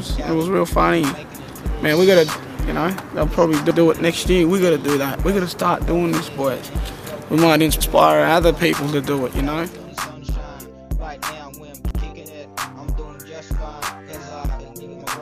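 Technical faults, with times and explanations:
3.71–3.81 s, 7.81–7.91 s and 11.91–12.01 s: overlapping chunks. Each 4-second block restarts 100 ms before the previous one finished, so that slice plays twice, giving a stutter every 4.1 s. On the waveform, a short segment repeats at each join; the spectrogram shows a thin vertical discontinuity there.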